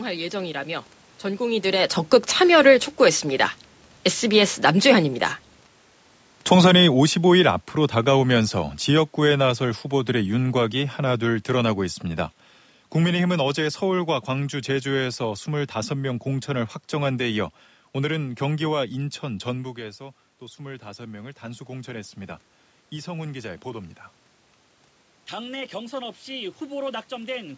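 From 6.36 to 11.83 s, automatic gain falling: the gain control judged the input too loud and pulled its gain down by about 8 dB, gradually rather than in a single step. Across those five and a half seconds the speech sinks steadily, and the room noise behind it sinks by the same amount, so the whole sound seems to recede while the talker's own level stays put.

From 19.59 to 23.96 s, automatic gain rising: just before this, around 19.5 s, the talker moves away and the input drops by about 14 dB. The control responds by raising its gain by about 6 dB over roughly four seconds. The speech swells back up slowly, and the background room noise swells with it. Since the rise covers less than half the drop, the speech still ends noticeably quieter than before the move.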